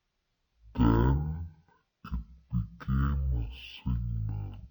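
From start to finish, the speech is slowed to half speed and sits a full octave low, 12 semitones down. This is stereo read as mono. The left and right samples were interleaved, but the player took them as one channel, one after another. Every second of audio now spans two. Syllables drag and the voice sounds deep and sluggish. A faint, ghostly mirror of the sound also rises in the upper half of the spectrum.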